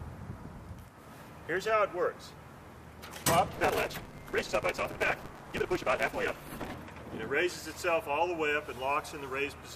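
From 3.54 s to 6.75 s there is a block size mismatch, truncated type. One stage writes longer blocks than the next stage reads. The tail of each block is discarded. Each cut leaves a small seam, and the seams repeat about 188 times a second, giving a steady buzz at 188 Hz. Because material is dropped, the sound runs about 1.88 times too fast. Its pitch stays roughly normal. The block rate fits a 256-sample read.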